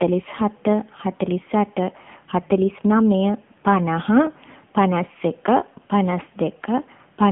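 From start to finish the speech sounds boxed-in and buzzy, with a synthetic, papery edge. Nothing is heard above about 3.6 kHz, and the low end thins out below roughly 150 Hz. This is the AMR narrowband mobile codec: AMR-NB rebuilds speech from a vocal-tract model and a handful of pulses per short frame. The plainly audible roughness comes from one of its middle modes, around 8 kbps.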